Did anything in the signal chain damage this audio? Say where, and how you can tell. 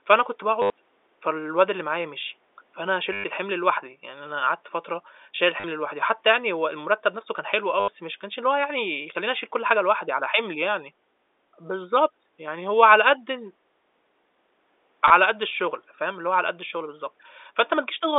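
Yes. The network stage lost packets, and the receiver concealed them with packet loss with last packet repeated. Short robotic stutters appear at 0.62–0.70, 3.13–3.24, 5.60–5.64, 7.80–7.88 and 15.08–15.10 s. Each gap replays stale audio. The buzz suggests packets of about 10 ms.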